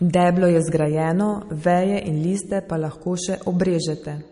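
From start to finish, the speech carries plainly audible coding damage, likely from MP3 compression. Nothing is left above 10.6 kHz. The treble stops at that fixed point, so the top end sounds dull and closed. The damage points to a low bitrate, around 40 kbps. With so few bits, the encoder drops weak frequency lines, and they flicker in and out between frames. That gives a watery, swirling texture. S sounds turn metallic, and attacks smear.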